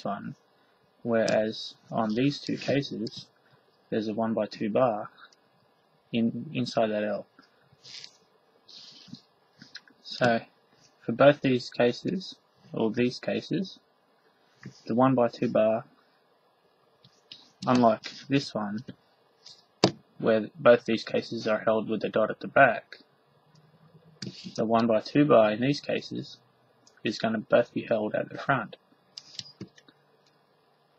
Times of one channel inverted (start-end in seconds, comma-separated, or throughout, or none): none